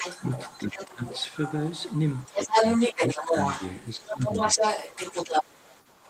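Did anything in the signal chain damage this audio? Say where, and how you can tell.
Yes. The damage is in call processing. A second voice runs under the talker for the whole clip, from 0.0 to 6.1 s, at roughly the same level as the talker or a little above it. This is the other side's voice leaking through. The talker's device is playing the far end on a loudspeaker, and the microphone picks it back up. The likely cause is an echo canceller whose adaptive filter has not modelled that acoustic path, so the echo passes into the outgoing signal.

The same stage produces speech suppressed in double talk. The talker's level dips at 0.58–1.04 s (deepest, around 15 dB), 2.28–2.58 s (around 10 dB), 2.97–3.35 s (shallow, around 5 dB) and 3.96–4.31 s (around 10 dB), each dip covering a few hundred milliseconds or less. These fall where both voices overlap. The likely mechanism is that the canceller can't separate near-end speech from the echo and attenuates everything while both are active.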